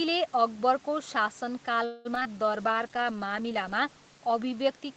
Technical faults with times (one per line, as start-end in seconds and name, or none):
1.85-2.27 repeated packet loss (robotic sound)
2.27-2.46 jitter buffer slow-down
2.43-4.84 call bitrate drop